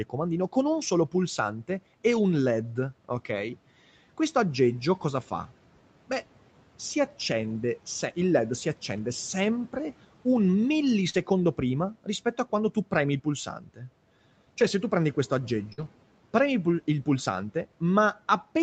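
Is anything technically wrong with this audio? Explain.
Yes, a handful of network glitches plus one noise-suppressor slip.

Lost packet rebuilt from error correction, at 2.11–2.17 s, 8.97–8.99 s, 11.14–11.20 s, 14.61–14.63 s and 15.78–15.88 s. Packets went missing, but Opus had tucked a low-bitrate copy of each into the next packet, so the decoder played that instead. There's no gap, just 20 to 60 ms of rougher, noisier sound, which fits one to three 20 ms frames each time.

Short concealed packet loss, at 11.09–11.16 s. About 40 ms never arrived in time. The receiver stretched the last sound over roughly 42 ms and blended back in, giving a quick smear or wobble. It runs straight into one of the rebuilt patches above.

Speech cut by the noise suppressor, at 13.46–13.80 s. The suppressor mistook bits of speech for background and pulled them down by up to about 12 dB, for around 150 ms in total across that stretch. 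Those parts sound swallowed and faint.

Burst of packet loss, at 15.73–15.80 s. About 40 ms went missing, and the receiver filled roughly 48 ms by extending the last sound and fading it, so you get a short held buzz or hiss before the audio picks up again a bit further on. The error-correction patch at 15.78 s overlaps its tail. The whole call path is limited to 8 kHz, so the rebuilt bits don't lose any extra top end.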